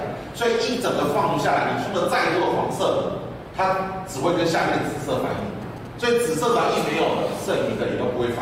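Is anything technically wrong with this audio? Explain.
Yes. From 5.38 to 6.34 s there is a galloping dit-dit-dit of brief 217 Hz buzzes, roughly 20 dB below the sound. These are GSM signalling bursts: a nearby 2G phone's radio pulses are rectified by the audio circuit.

From 6.54 to 7.82 s a hard, raspy 217 Hz buzz rich in harmonics sits about 18 dB below the sound. This GSM phone buzz comes from a phone in a call transmitting in bursts 217 times a second.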